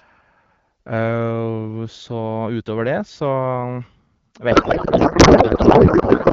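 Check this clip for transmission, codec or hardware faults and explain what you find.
One transmission fault is present: a codec payload misread from 4.51 s to the end of the clip at 6.32 s. The AMR wideband coding before it is clean, which points to a rate around 12.65 kbit/s.

From 4.51 s the decoder unpacks the AMR payload in the wrong layout, which fits octet-aligned frames being read as bandwidth-efficient. Every field lands in the wrong place, so the speech becomes garbled warble and noise that barely tracks it. On a spectrogram, the harmonic striations give way to smeared broadband texture. On the waveform, the envelope stops following syllables.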